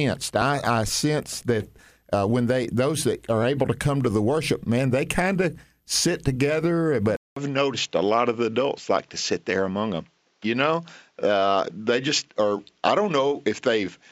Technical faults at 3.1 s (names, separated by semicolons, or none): none